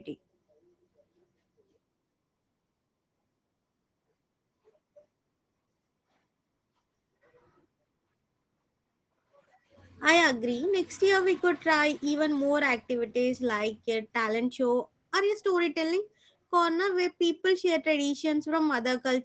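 Speech carrying Opus voice compression from start to finish: the SILK coder's coarse excitation makes the voice plainly hoarse and slightly robotic, with a muffled top end, which points to a low bitrate near 12 kbps in wideband mode. On a spectrogram, energy stops flat at about 9 kHz with an empty band above, and harmonics look smeared and grainy, with texture that fits 20 ms coding frames. The waveform looks unremarkable.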